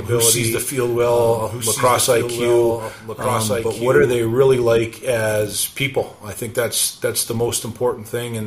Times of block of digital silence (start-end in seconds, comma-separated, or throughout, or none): none